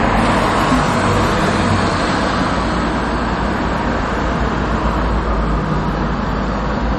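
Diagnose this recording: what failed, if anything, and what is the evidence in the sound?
The sound is watery and swirly across the whole clip, with smeared attacks. The stage is the codec, likely MP3 compression. A low bitrate, fitting about 48 kbps, drops weak frequency lines from frame to frame.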